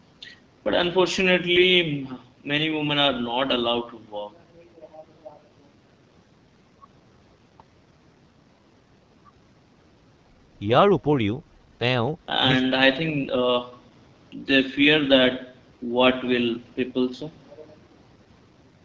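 A speech clip carried through the AMR wideband (HD Voice) codec for its whole length. The damage is plainly audible. The speech sounds rough and raspy, and the top band above 6.4 kHz is filled with shaped noise rather than real detail. That fits a low rate of about 8.85 kbit/s.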